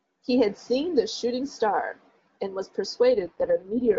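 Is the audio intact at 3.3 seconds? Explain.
No. At 3.3 seconds the speech is inside an AMR rate drop that runs from 3.12 s to the end of the clip. The link has weakened, so the codec switches to a lower rate and spends the freed bits on error protection. The band stays the same and there is no gap. The voice turns rough, raspy and synthetic, which fits a fall from 23.85 kbit/s wideband coding to 6.6 kbit/s.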